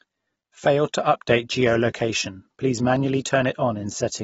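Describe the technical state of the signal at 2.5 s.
At 2.5 s the speech carries plainly audible AAC compression, likely the cause, present across the whole clip. Nothing survives above 7.7 kHz, which fits a low bitrate near 24 kbps. Unlike a plain low-pass, coarse spectral quantisation adds a smeared, warbling or fizzy texture.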